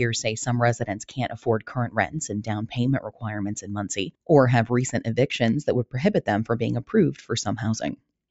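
A noise suppressor built for speech stays engaged on this sound from start to finish, and it keeps misreading sustained, non-speech content as noise. Its gain rides up and down by around 10 dB as it does, so onsets pass through while held tones and tails get pulled back. The level pumps and flutters instead of holding steady. The call microphone processing also leaves nothing above 8 kHz, which is a normal limit and not part of this fault.

The clearest instances of sound cut by the noise suppressor come at 0.9 to 2.16 s and 3.03 to 3.25 s. In the first span, roughly 0.7 s in total is pushed down, at worst by about 15 dB, as the suppressor clamps on a sustained or decaying portion and the level sinks audibly. The second, shorter dip reaches about 14 dB, briefly pushing the sound down.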